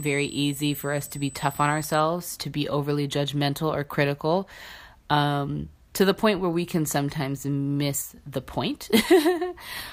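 USB whine runs from 0.0 to 2.0 s, ending just before "to be overly". It is a steady, fixed-pitch tone at 8 kHz, strongest at its harmonic of 16 kHz, sitting roughly 15 dB below the speech. The 8 kHz rate matches the 125-microsecond microframes a USB bus uses to move data. That periodic current draw has leaked into the audio through the shared power or ground, so the bus's timing is heard as a high whine under the voice.

A sudden gain jump follows at 8.02 s, right after "where we can sometimes". The level of the speech and the background noise drops together by about 6 dB and stays down for about 0.16 s, recovering at 8.18 s before "the point". Because both step at once, the change happened to the whole signal rather than the talker. It was likely a digital gain setting or bit shift applied instantly, with no ramp to smooth the transition between samples.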